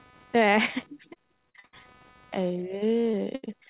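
Across the whole clip runs computer activity noise, a faint buzz pulsing at roughly 300 Hz and sitting about 35 dB below the speech. Processor or peripheral load is disturbing the shared audio ground. On a spectrogram it appears as a comb of harmonics that rises and falls with computer activity and ignores the speech envelope.

From 1.14 to 1.75 s comes repeated packet loss (robotic sound). Five gaps arrive in quick succession, the longest 71 ms, and about a third of the stretch is concealed by continuing the preceding sound. The speech turns choppy, with pieces missing. The waveform shows repeated, looped-looking segments, and the spectrogram shows smeared harmonics with ragged edges.

Two instances of short concealed packet loss follow, at 3.01 to 3.05 s and 3.11 to 3.15 s. Each loses about 20 ms, patched by extrapolating the last sound before blending back. They are heard as brief smears or wobbles, visible as tiny blurred patches breaking the spectrogram's fine detail.

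From 3.35 to 3.45 s a burst of packet loss removes about 80 ms. The receiver stretches the last sound and fades it, so a held buzz or hiss dies away before speech resumes with that part missing. The waveform shows a decaying, repetitive stretch ending in a jump. Throughout, the telephone-band codec leaves nothing above 4 kHz.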